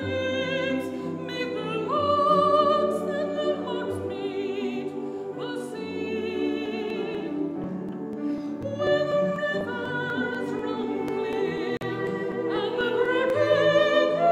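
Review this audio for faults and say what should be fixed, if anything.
From 6.66 to 13.30 s there are periodic USB or driver dropouts. Roughly 4 ms of audio is skipped every 0.25 s, heard as regular ticks. Something is blocking the bus or driver at a fixed rate. Fix this by finding that background task and raising the audio thread's priority or buffer size.

At 11.77 s the output goes silent for about 41 ms, then resumes further on. This is likely a Bluetooth dropout, consistent with two late packets. Prevent it with a shorter, clearer wireless path or a wired connection.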